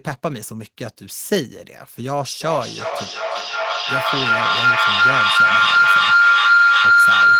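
From 2.4 s to the end, a feedback howl takes over: two devices on the same call share a room, so the microphone keeps picking up the loudspeaker and sends it round again louder on every pass. Instead of fading, the repeats narrow onto a single shrill tone near 1.5 kHz that pulses roughly every 0.4 s, the time one trip round the loop takes, and climbs to about 12 dB above the speech.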